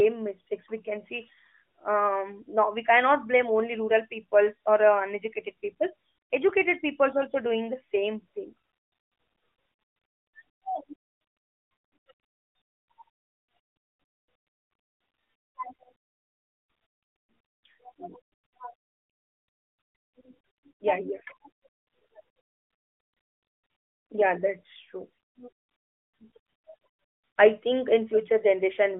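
Nothing stood out as a fault on listening to this speech clip, which carries the narrow telephone-band sound of the AMR narrowband mobile codec.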